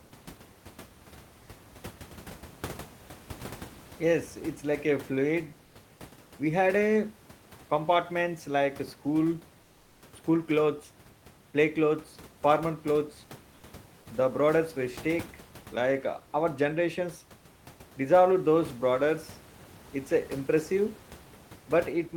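Comfort noise in place of the background occurs from 9.67 to 9.97 s in this speech clip. For 300 ms the real room noise gives way to a steady, featureless hiss about 2 dB quieter. The likely cause is Opus discontinuous transmission, where the sender goes silent and the receiver synthesises filler noise.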